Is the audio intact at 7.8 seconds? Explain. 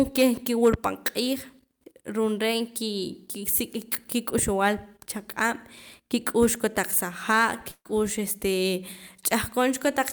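No. A burst of packet loss runs from 7.71 to 7.87 s. Consecutive packets arrived too late or not at all, so the receiver prolonged the last sound and turned it down for about 135 ms, with 40 ms of silence, then resumed with 140 ms of speech missing.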